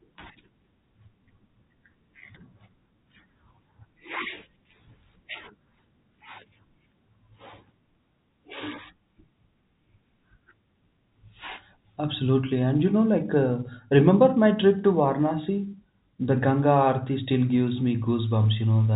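No technical faults can be heard in the speech, which carries the narrow band of G.711 telephone coding, with nothing above about 3.8 kHz and only the faint level-following hiss that the format's 8-bit logarithmic steps leave beneath the signal.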